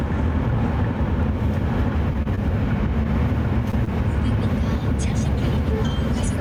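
Everyday sounds with two brief held moments, at 2.23 to 2.27 s and 2.35 to 2.39 s, where the sound drags for about 27 ms and 21 ms. These are short stalls from a late packet: the jitter buffer emptied, so the last sound was stretched until the data arrived. At 3.71 to 3.75 s and 3.85 to 3.89 s, quick smears replace 20 ms of real audio each time. This is short concealed packet loss, where the receiver extrapolated the preceding sound to cover the gap.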